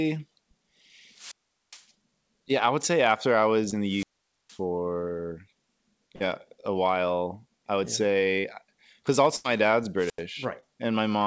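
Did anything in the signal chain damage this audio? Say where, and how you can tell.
Yes. The wireless microphone's radio link faded three times and the receiver's squelch shut the output, causing a squelch dropout each time. Static rises, then near silence: 1.12 to 1.86 s, muted about 0.41 s before "yeah I would say"; 3.85 to 4.61 s, muted about 0.47 s after "after I was in"; and 9.97 to 10.24 s, muted about 86 ms.

Downstream, on the network side of the call, 20 to 40 ms of audio arrived too late and the decoder concealed each short packet loss by extending the preceding sound. Brief smears or wobbles occur at 3.70 to 3.74 s after "say after I was", 6.16 to 6.22 s, 8.40 to 8.46 s and 10.60 to 10.64 s.

A burst of packet loss at 9.36 to 9.46 s removed about 80 ms. The concealment held the last sound and let it decay into a fading buzz or hiss, so the audio resumes slightly further on with that stretch gone. 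This plays through a wideband call path that has nothing above 8 kHz.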